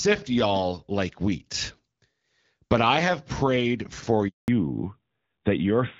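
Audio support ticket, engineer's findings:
Handover gap, 4.28 to 4.48 s, right after "I have prayed for": audio cuts out for 200 ms. Probable component: network handover, with no speech frames delivered during the switch. Waveform shows a flat line. Spectrogram shows a full-height blank column.

Fallback to narrowband from 4.48 s to the end: duller, rougher sound, with nothing above 4 kHz. The codec probably dropped from AMR-WB HD Voice to an AMR-NB-class codec after the handover. Spectrogram shows a hard ceiling at 4 kHz where wideband energy stopped.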